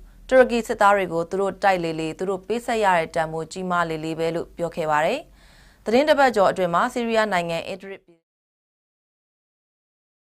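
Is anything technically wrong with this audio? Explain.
No, nothing is technically wrong.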